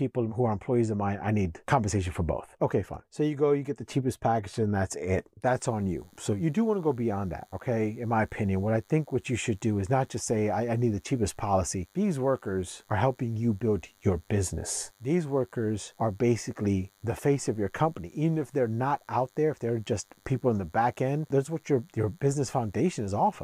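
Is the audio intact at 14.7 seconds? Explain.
No, a DECT cordless phone buzz runs from 5.46 s, just after "package and that's it", to the end: 100 Hz radio bursts, rectified into a faint thin buzz, appearing as evenly spaced harmonic lines on a spectrogram.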